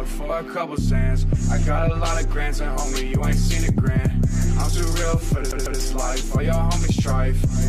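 A CD stuck on one turn at 5.51 to 5.81 s: the laser jumps back each rotation, replaying a 148 ms fragment twice with brief mutes, a fast, even stutter.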